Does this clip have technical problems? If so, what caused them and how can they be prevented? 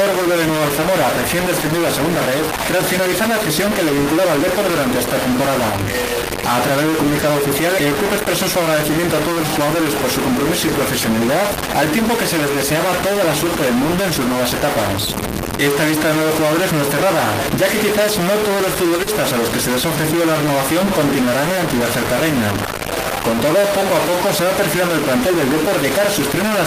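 Yes. A distortion runs through the whole clip, with a noise floor filling the pauses instead of silence. This is likely a stuck bit: one data bit frozen at 0 or 1, so about half the sample values are offset by that bit's weight in a waveform-dependent pattern. Unlike clipping, it persists at low levels. Checking the converter and its data lines for a broken connection prevents it.

A short stall from a late packet occurs at 7.19 s and again at 18.97 s, each about 20 ms of held sound. The jitter buffer emptied, the last sound was stretched until the packet arrived, and playback resumed where it stopped. Nothing is lost, only briefly drawn out. A larger or adaptive jitter buffer prevents it.

Short concealed packet loss follows at 19.03 to 19.10 s, where about 40 ms never arrived and was filled by extending the preceding sound before blending back. Unlike the stall, real audio is missing here, heard as a brief smear. 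Forward error correction or a more stable network path prevents it.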